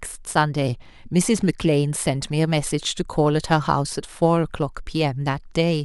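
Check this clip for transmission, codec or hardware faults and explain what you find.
No fault can be heard anywhere in the speech.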